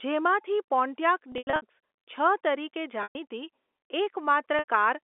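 Speech over a G.711 telephone line (300 Hz to 3.5 kHz), hit by packet loss with pitch repetition at 1.32 to 1.62 s (scattered, longest gap 90 ms), 3.03 to 3.15 s and 4.59 to 4.64 s. The receiver loops the last pitch period and fades it out over about 50 ms, so the longer gaps fade into silence before the speech returns with a short cross-fade.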